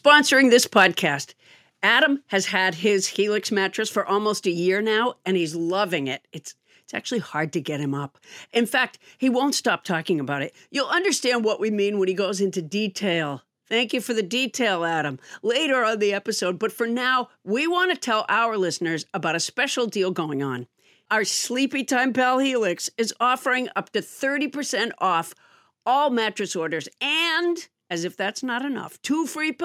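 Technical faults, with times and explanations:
0.77–0.85 s, microphone overload: peaks flattened against the converter's limit, likely from input gain about 2 dB too hot; waveform shows squared tops, roughly one percent of samples, plus broadband crackle on the spectrogram.
1.02 s, microphone volume stepped down: speech and background drop together by about 4 dB in one step, likely automatic gain reduction after the clipped peak; the waveform envelope visibly shrinks.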